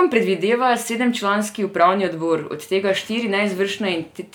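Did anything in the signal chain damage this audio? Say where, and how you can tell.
No, nothing in the signal chain audibly damaged this speech recording, and its level, continuity and timing stay intact throughout.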